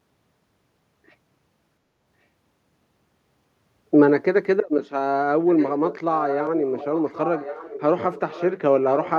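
Echo leak appears at 5.57, 5.88, 6.15 to 7.82, 7.99 to 8.53 and 8.95 s: a copy of the speech returns about 1.09 s late, some 10 to 15 dB below it, likely because a loudspeaker's echo canceller failed to remove what the microphone picked up.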